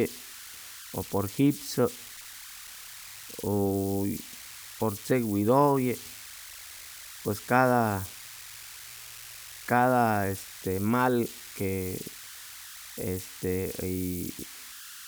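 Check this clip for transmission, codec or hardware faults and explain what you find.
One hardware fault runs through the speech: converter idle tones, heard throughout as a tone around 1.5 kHz in pauses, at about 17 dB below the signal. An undithered delta-sigma converter locks into repeating bit patterns on small inputs, and unlike fixed hum, their pitch follows the input offset.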